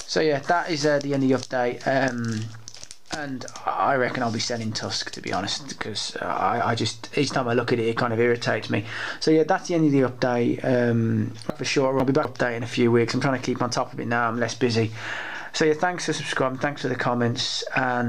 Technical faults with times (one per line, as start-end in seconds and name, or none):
11.50-12.25 chunks out of order